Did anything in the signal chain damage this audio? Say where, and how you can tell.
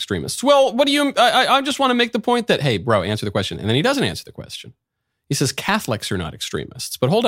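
No, no damage detected.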